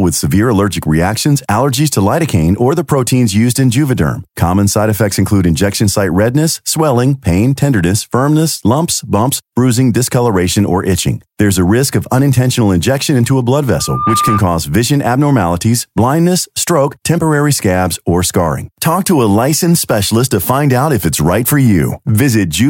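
It's a speech clip with a burst of loudspeaker feedback squeal from 13.79 to 14.42 s, right after "injection into a blood". A 1.2 kHz tone swells up over roughly a third of a second to about the level of the speech. That's the mic catching its own speaker until the loop runs away, and it's gone before "vision abnormalities blindness stroke".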